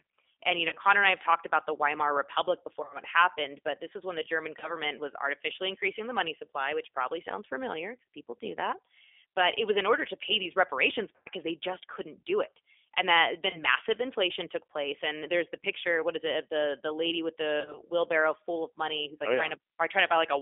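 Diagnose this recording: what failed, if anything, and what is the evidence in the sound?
The codec stage is at fault. The whole 20-second speech clip carries G.729A coding at 8 kbit/s. The band is held to about 300 Hz to 3.5 kHz. Rebuilding speech from a vocal tract filter, pitch predictor and sparse pulses leaves plainly audible synthetic roughness.

The network stage dropped packets, and the speech decoder's VoIP packet loss concealment filled each gap. The gaps fall at 0.69–0.78 s, 2.83–2.98 s, 4.59–4.77 s (before "was artificially increasing the"), 11.16–11.28 s, 13.50–13.59 s (between "do it and that" and "massive inflation took place") and 17.61–17.82 s (between "the the lady with" and "wheelbarrow full of money"). Each gap lost 30 to 100 ms of audio. The decoder repeats its last pitch and filter at falling gain, giving a buzzy tone or fading coloured noise. Because each frame builds on the previous one, the sound stays distorted briefly after packets resume.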